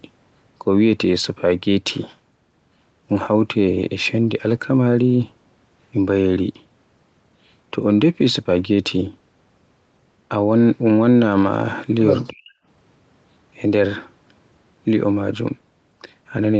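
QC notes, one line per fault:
12.30–12.51 s, speech suppressed in double talk: the speech sinks by about 40 dB for roughly a fifth of a second, then returns. This is likely the echo canceller failing to tell the near-end talker apart from the far-end loudspeaker echo during overlapping talk and turning the near-end signal down with it. Unlike a packet-loss dropout, there is no robotic concealment smear; the level is gated down and back up like a suppressor acting.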